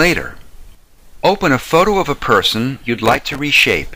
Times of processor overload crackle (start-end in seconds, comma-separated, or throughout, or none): 3.06-3.39